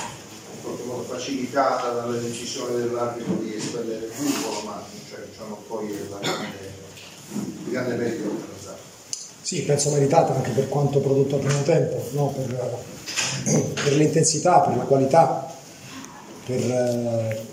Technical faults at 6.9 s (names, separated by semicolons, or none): none